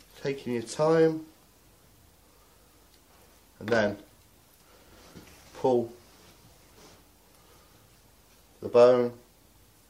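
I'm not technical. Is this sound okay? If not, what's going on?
Yes, the sound is okay: there are no technical problems to be heard anywhere in it.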